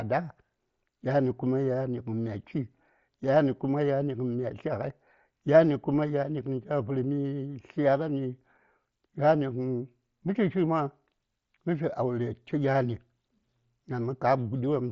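Nothing technically wrong can be heard in this speech recording. It has passed through a Bluetooth mSBC headset codec, which keeps the speech band up to about 8 kHz and leaves only a light grain on the louder sounds, consistent with its low codec damage.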